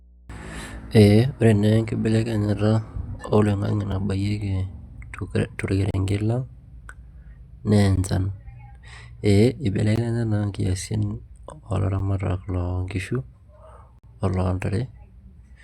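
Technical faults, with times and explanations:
Throughout, mains hum: a steady 60 Hz tone sits beneath the speech, around 30 dB below it, with some low harmonics. Power-line current is leaking into the signal path, most plausibly through a ground loop or a nearby transformer, so the tone never changes.
3.92, 5.91 to 5.94, 7.96, 9.96, 11.99 and 13.99 to 14.04, gap between stream segments: hard-edged silent holes every 2 s, lasting from under 5 ms to about 50 ms, the one at 9.96 just before "naa inkiasin". Adjacent segment time stamps don't meet, so the player pads with silence. Nothing is lost, only time added.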